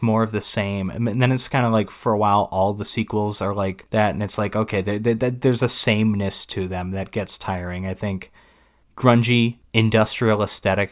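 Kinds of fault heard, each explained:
Nothing here calls for a name on this list, since the speech comes across without any dropout, glitch or distortion worth flagging.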